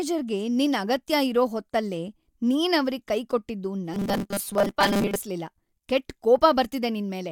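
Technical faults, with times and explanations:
3.94 to 5.16 s, robotic sound from repeated short buffers: speech turns into a rigid metallic 200 Hz buzz, likely from a 5 ms chunk replayed through most of this stretch.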